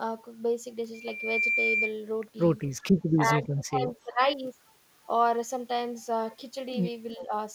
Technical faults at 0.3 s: none

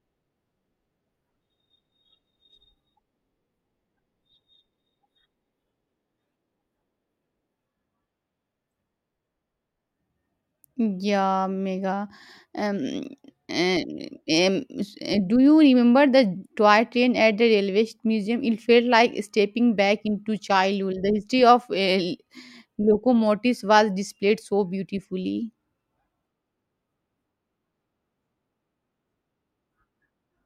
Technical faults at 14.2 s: none

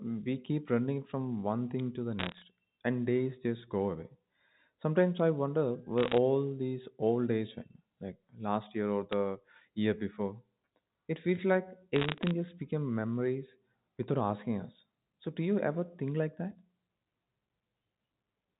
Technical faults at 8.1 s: none

